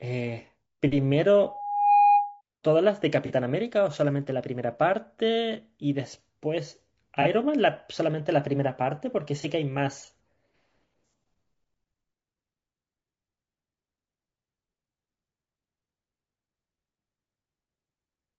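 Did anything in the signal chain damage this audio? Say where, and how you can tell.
Yes. Throughout, the speech sounds rough and grainy, with noise filling the gaps between harmonics and a thin, synthetic-sounding top band. That points to the codec stage, likely low-delay AAC compression (AAC-ELD) at a low bitrate around 32 kbps, where short frames resolve pitch harmonics poorly.

From 1.43 to 2.41 s a single tone near 817 Hz swells over roughly half a second and peaks about 10 dB above the speech. This is loudspeaker feedback squeal: a microphone picked up its own loudspeaker, and the loop gain exceeded one at that frequency.

Brief smeared, noisy patches appear at 3.26–3.31 s, 7.22–7.27 s and 9.41–9.45 s, each covering a gap of about 30 ms. These are AAC frame losses with concealment: in the network or decoding stage, the decoder patched each missing frame from the last good spectrum.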